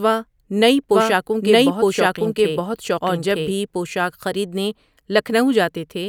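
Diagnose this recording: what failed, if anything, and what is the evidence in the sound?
A doubled audio track runs from 0.91 to 3.51 s: a full-band copy about a second behind, roughly as loud, starting and stopping abruptly, likely a second, slower capture path.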